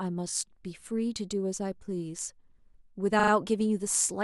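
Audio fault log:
0.29–0.34 s, repeated frames: a short chunk of about 20 ms gets played twice more back to back, which fits a single compressed frame being sent again. You hear a quick stutter, and the audio runs 40 ms longer.
3.19–3.31 s, repeated frames: the same thing, but a bigger chunk of about 40 ms, probably a couple of frames, comes around three extra times. The stutter is longer, and it adds 120 ms.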